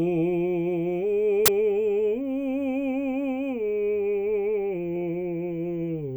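A short music clip with one uninitialised buffer fault: at 1.46 s a harsh, loud burst of digital noise cuts in and lasts about 23 ms, to 1.48 s. A block of memory was sent to the output before any audio had been written into it, so leftover values played as samples. The length fits a 1024-sample block. Unlike a click or dropout, it is a dense, loud, broadband blast, not a single tick or a silence.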